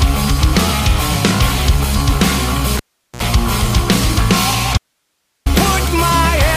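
At 2.77 s a cable pulled and plugged in breaks the sound with a pop, then about 400 ms of near silence while the connection is open. As the plug goes back in, a 57 ms burst of 60 Hz mains buzz comes through before a second pop at 3.22 s restores the signal.

From 4.78 s to 5.46 s there is an audio dropout to a faint residue. The sound cuts off abruptly for 683 ms, leaving only hiss roughly 55 dB below the signal, then returns just as suddenly. The likely cause is the source feed being lost while the downstream path stayed live.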